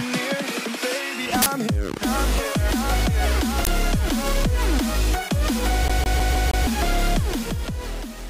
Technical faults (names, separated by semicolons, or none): uninitialised buffer; CD stuck on one turn